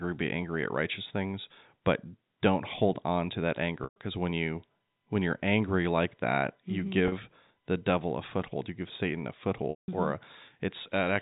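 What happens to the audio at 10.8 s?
Nothing goes wrong at 10.8 s: the speech carries on intact there, with only the narrow, telephone-like band of the G.711 coding that runs through the whole clip.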